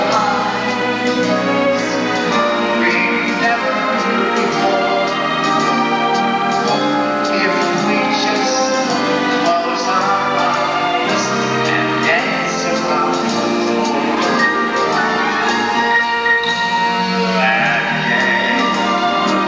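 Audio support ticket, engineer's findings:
No audible technical faults found on listening; signal continuous, no dropouts, distortion, level jumps or timing irregularities heard.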